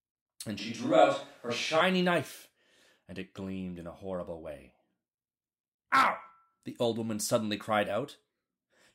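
From 0.59 to 1.81 s, the close microphone likely dropped out, forcing a switch to a distant microphone: speech turns abruptly roomy, hollow and thinner, at unchanged level, with faint room noise.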